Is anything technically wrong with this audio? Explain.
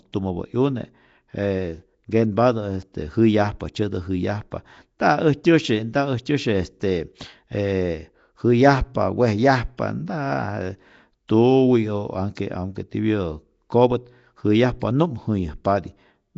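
Yes. Throughout the speech there is plainly audible Nellymoser compression damage, likely from Flash's Nellymoser Asao codec at a rate that fits roughly 32 kbps. Each short block gets a fixed, meagre bit budget, so quieter bands are dropped and replaced with synthetic noise, giving a rough, hissy halo and a smeared, underwater quality. A spectrogram would show a hard ceiling at 7.7 kHz, grainy noise-filled patches between harmonics, and time-smearing at onsets.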